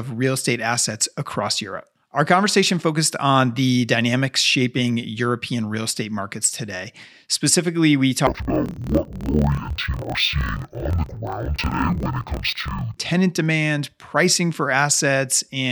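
From 8.27 to 12.98 s the speech drops an octave and turns doubled and choppy, with blocks repeating at 38.3 Hz. This is interleaved audio read as planar: each 26.12 ms block of alternating left and right samples is split into halves, and each half plays at half speed.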